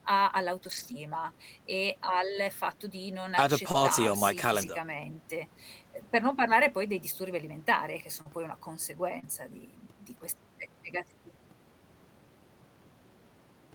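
From 0.63 to 0.93 s, lost packets were rebuilt from error correction. The decoder played low-bitrate copies, so nothing drops out, but the sound turns rough and noisy. The same happens at 2.71 s and from 4.61 to 4.71 s.

Short concealed packet loss starts at 3.71 s. About 20 ms never arrived. The decoder extended the previous sound to fill it, which is heard as a brief smear. At 3.73 s an error-correction copy takes over. The same pair recurs at 8.21 s, with the rebuilt copy at 8.25 s, and at 9.19 s, with the rebuilt copy at 9.23 s. Each of those later gaps was about 40 ms.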